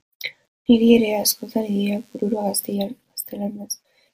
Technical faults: DECT cordless phone buzz

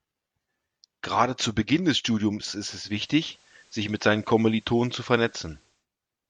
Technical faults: digital radio blending to analogue

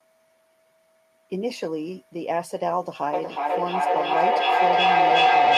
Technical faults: feedback howl

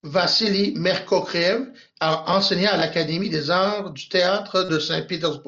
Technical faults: concealed Bluetooth headset packet loss

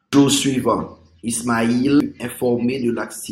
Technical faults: damaged data in a compressed stream

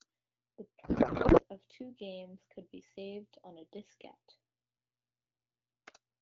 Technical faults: codec payload misread

